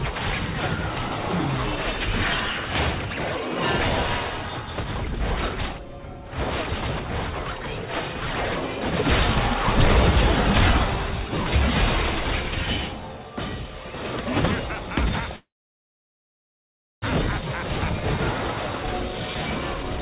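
From 15.36 to 17.04 s the audio stalls in a call audio freeze. A brief fading continuation of the last sound gives way to about 1.56 s of silence, then the audio resumes where it stopped, with nothing lost but the timeline pushed back 1.66 s. The likely cause is delayed packets draining the jitter buffer.

From 18.84 s to the end at 20.01 s a jitter buffer speed-up plays the audio at 114% speed with unchanged pitch. The receiver trims pitch-period-length pieces to cut the built-up delay, removing about a fifth of a second in total, so this stretch sounds hurried. Throughout, nothing is heard above 4 kHz, which fits a narrowband G.711 call codec.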